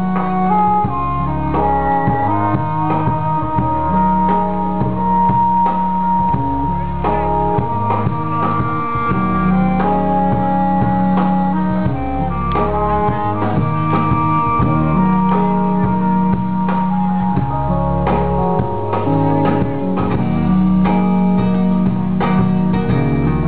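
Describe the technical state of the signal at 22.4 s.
At 22.4 s the signal is intact, with no dropout, distortion, clipping or other technical fault audible.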